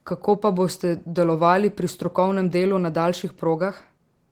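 Opus voice compression runs throughout this speech clip, from start to end. Its hybrid mode codes the band below 8 kHz with linear prediction and the top band up to about 20.3 kHz with a transform layer, and the coarse excitation leaves speech audibly hoarse and slightly robotic, consistent with roughly 16 kbps.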